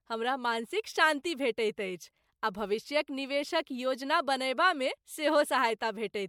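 Throughout the speech there is swirly, smeared and hollow coloration with blurred attacks, worse than a single encode at a rate fitting 96 kbit/s MP3 would give. This points to generation loss, likely from a few repeated MP3 passes whose shifted frame grids stacked their noise and spectral holes, while content still reaches up to 20 kHz.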